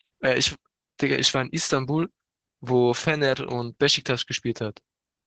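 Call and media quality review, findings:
Opus voice compression, whole clip, 0 to 5.3 s. Codec starved of bits, sound suggesting the SILK linear-prediction mode near 10 kbps, band capped at 8 kHz. Coarse excitation coding: speech muffled, hoarse, faintly robotic; top end gone above 8 kHz. Heavy codec damage.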